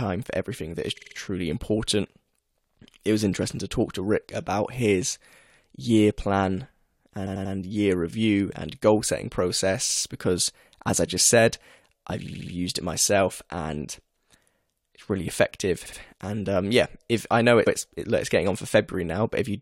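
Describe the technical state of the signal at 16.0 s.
Repeated frames run from 15.85 to 15.99 s. A 70 ms block of compressed audio replays twice. It stutters and adds 139 ms.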